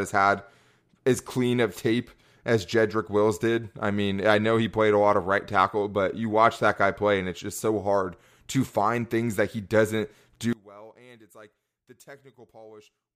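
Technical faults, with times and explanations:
10.53–13.15 s, one channel inverted: after "things that he doesn't" the speech falls by about 25 dB to a faint residue rather than silence or an even fade, likely because one channel's polarity flipped, cancelling the centred voice when summed to mono.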